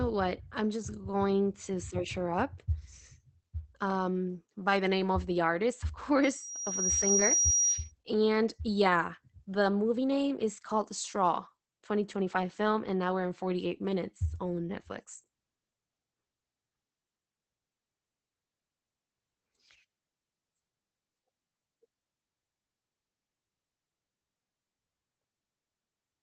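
Across the whole clip the speech has passed through Opus voice compression in its SILK linear-prediction mode, at a rate that sounds like about 12 kbps. The excitation is coded coarsely, so the voice is plainly muffled, slightly hoarse and faintly robotic throughout.

From 6.23 to 7.92 s a loudspeaker feedback squeal appears. The microphone picked up its own loudspeaker, and the loop gain exceeded one at 5.7 kHz. That single tone swells over roughly 0.7 s into a squeal about 5 dB above the speech, then stops.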